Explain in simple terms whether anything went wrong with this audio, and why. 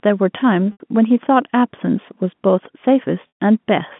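Yes: packet loss with pitch repetition. Chunks of speech went missing in transit, and the receiver filled each gap by repeating the last bit of voice. Around 0.72 to 0.80 s and again near 3.28 to 3.32 s, the voice briefly holds with a buzzy sound, then fades into silence before the speech returns.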